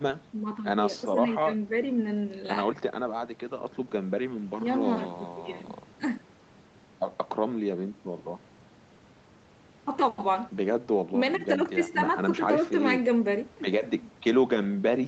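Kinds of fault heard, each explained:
No technical faults can be heard anywhere in this speech.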